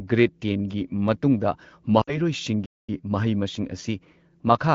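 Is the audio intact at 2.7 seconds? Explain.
No. At 2.7 seconds the speech is in the middle of a playback stall that runs from 2.66 to 2.89 s, a gap of roughly 230 ms. The sound cuts off abruptly mid-flow, stays silent for that stretch, and then continues. The likely cause is the player running out of buffered data, or its output thread being blocked, so nothing reached the output until it recovered and resumed feeding samples.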